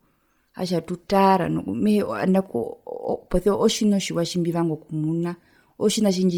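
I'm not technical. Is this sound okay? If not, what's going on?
No. Bluetooth LC3 compression affects the whole clip, start to finish. The speech has a breathy, grainy edge, likely from a wireless link squeezing the sound hard: it handles audio in 10 ms slices, throws away much of the high end, and fills the gap with noise.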